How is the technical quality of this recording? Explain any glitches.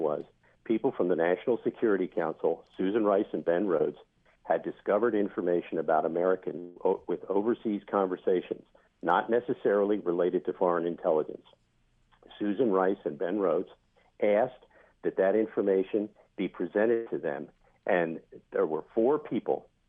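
There are three network-related glitches in the recording, all in the same family of lost audio being patched over by the receiver.

At 3.77 to 3.81 s there's a short concealed packet loss. About 20 ms of audio didn't arrive in time, so the decoder invented roughly 21 ms to cover it by extending whatever was sounding just before, then cross-fading back into the real signal. It's tiny: you get a quick smear or wobble rather than a gap, and anything very brief at that spot can get swallowed.

At 6.59 to 6.78 s a stretch of about 160 ms goes missing, and the receiver papers over all of it, around 162 ms of synthesized fill with no drop to silence. You hear the preceding sound carried on as a buzzy or hissy tail that sags away, then the audio picks up again a little further along with that chunk simply gone. The likely culprit is a long network dropout, though since the fill never quite bottoms out into silence it sits near the short end of that.

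At 16.94 to 17.08 s there's a burst of packet loss, about 120 ms lost in a row, which points to a few consecutive packets going astray or showing up too late. The concealment stretched the last sound across roughly 124 ms while turning it down, so it comes across as a held, fading buzz or hiss. Then the audio jumps back in further on, with the middle portion missing.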